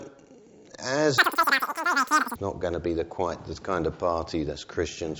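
Between 1.18 and 2.36 s the audio suddenly runs three times too fast and jumps up about 19 semitones, a classic wrong sample rate fault. Speed and pitch rise together, which fits 16 kHz material being played out at 48 kHz without conversion.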